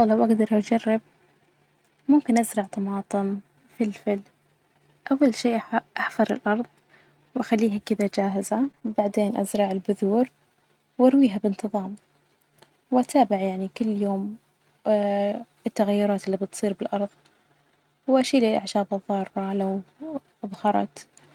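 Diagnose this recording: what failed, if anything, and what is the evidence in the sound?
The failure is in the network stage: repeated packet loss (robotic sound) between 8.63 and 8.92 s. Four short holes, the longest 25 ms, were each patched by stretching the preceding sound, so roughly 70 ms of that stretch is rebuilt rather than real. That is about a quarter of the span, and it gives the choppy quality with pieces missing. A buffer underrun would leave silent gaps or clicks. Here each hole is filled with a smeared continuation, and the pattern is bursty and confined to this one stretch.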